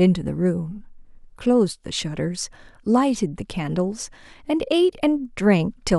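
Nothing in this short bit of speech points to a technical fault; there's simply nothing here to flag.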